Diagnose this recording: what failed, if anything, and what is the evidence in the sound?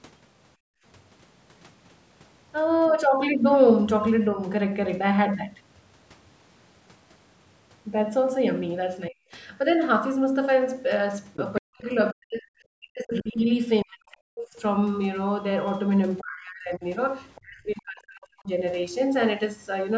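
Call processing, echo canceller: background gated by the echo canceller at 0.57–0.84 s. Room noise falls about 35 dB, showing as a blank gap in the waveform's noise floor.

Call processing: other side's voice leaking through, faint at 2.85–2.91, 14.11–14.15 and 17.35–17.41 s, stronger at 11.34–11.61 s. This is likely incomplete echo cancellation. It shows as stray harmonic traces on the spectrogram.

Call processing: speech suppressed in double talk at 9.09–9.22, 11.6–14.57 and 16.2–18.5 s. Speech drops by roughly 35 to 40 dB, likely from the canceller ducking during overlap, leaving notched holes in the waveform envelope.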